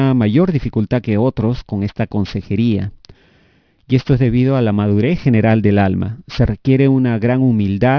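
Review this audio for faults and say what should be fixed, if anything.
Aliasing runs through the whole clip. The audio appears to have been downsampled to around 11 kHz with no anti-alias filter, so content above the 5.5 kHz fold mirrors back down as false tones roughly 30 dB under the speech, making sibilants gritty and metallic. To prevent it, low-pass filter below the new Nyquist frequency before lowering the sample rate, or resample from the original source with a proper resampler.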